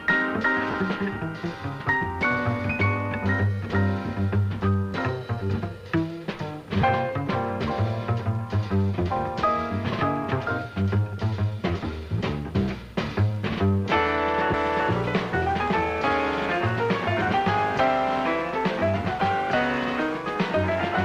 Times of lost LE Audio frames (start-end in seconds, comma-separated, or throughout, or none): 0.71-0.74, 6.81-6.83